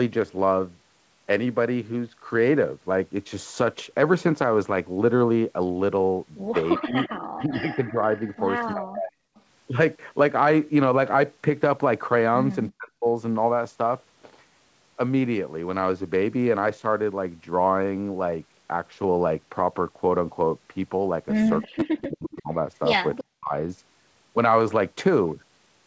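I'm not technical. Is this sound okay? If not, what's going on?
No. Speech suppressed in double talk happens from 6.78 to 9.16 s, briefly at 12.7 to 13.06 s, and again from 21.67 to 23.53 s. The voice sinks sharply in volume, at times nearly disappearing, in broken pieces. This is likely the call's echo canceller acting while both sides talked at once: unable to tell this talker apart from the sound coming out of the loudspeaker, it turned everything down together.

Echo leak is heard from 6.78 to 9.41 s and from 21.62 to 23.22 s, as a faint repeat of the voice trailing about a third of a second (343 ms) behind the original. One side was likely playing the call through a loudspeaker, and its microphone picked that sound back up. The echo canceller failed to remove all of it, so a quieter, delayed copy was sent back into the call.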